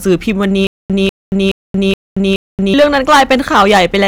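Hard clipping runs through the whole speech clip. The level is driven about 11 dB beyond what the signal path can pass, so a few percent of samples are cut flat. The flattened peaks add high harmonics, heard as harsh fuzz on every loud syllable.

From 0.67 s to 2.74 s there is a stutter with silent gaps. A 195 ms fragment plays five times, each followed by 228 ms of digital silence, repeating every 423 ms. The likely cause is a stalled player or stream replaying its last buffer on each retry, and the audio meant for that span is lost.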